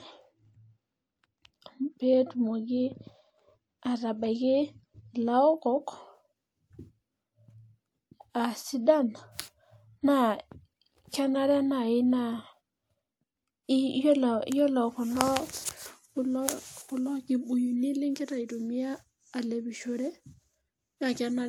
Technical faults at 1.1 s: channel delay (comb filtering)

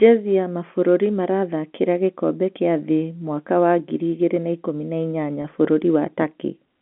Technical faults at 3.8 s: none

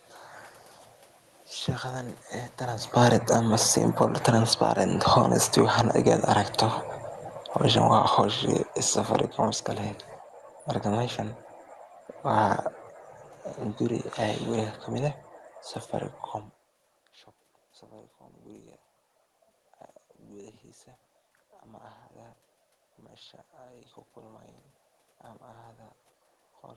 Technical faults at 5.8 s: automatic gain falling; automatic gain rising

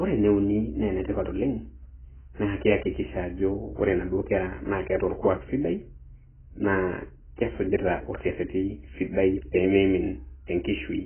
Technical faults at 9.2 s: AAC compression

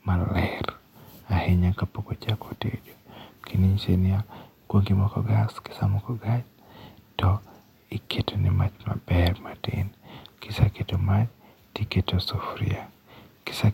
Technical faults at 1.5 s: none

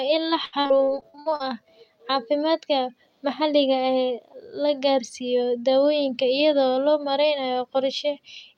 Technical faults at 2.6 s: none

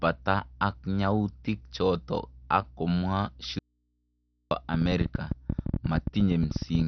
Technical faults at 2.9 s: MP2 compression

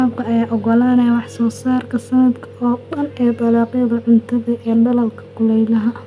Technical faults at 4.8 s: none

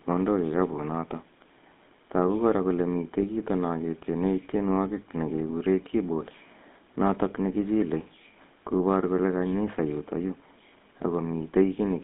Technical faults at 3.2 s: GSM full-rate codec; lost GSM frames

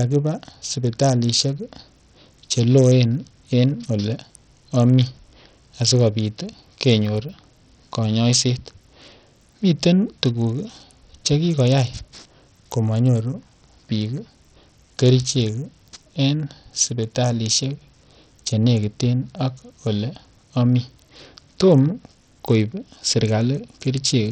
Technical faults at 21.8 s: Bluetooth SBC compression

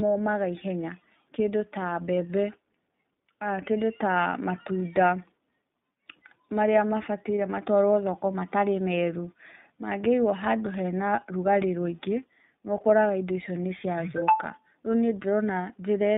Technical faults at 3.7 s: iLBC codec

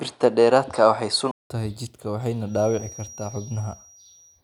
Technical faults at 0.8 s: input switched to a poorer device

